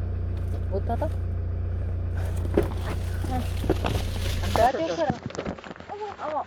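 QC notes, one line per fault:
2.88 s, 4.00 s, 5.09 s: compressed frames skipped. Audio jumps ahead about 100, 150 and 200 ms in whole 23.2 ms frames, leaving an audible join and a vertical seam at each skip.
4.66 s to end: input switched to a poorer device, likely. The spectrogram shows nothing above 7.6 kHz, level drops about 5 dB with no gap, and a new noise floor appears about 50 dB down.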